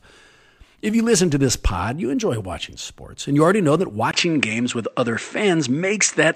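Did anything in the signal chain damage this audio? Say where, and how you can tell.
Yes. At 4.11 s the speech goes dull and boxy after a brief 20 ms gap, and it stays that way to the end of the clip. From that point nothing above 8.5 kHz comes through, the level shifts by roughly 5 dB, and a faint new noise floor appears, around 50 dB below the speech. The likely cause is that the input switched to a poorer device at the driver level, a different microphone or headset path with its own narrower band, gain and self-noise.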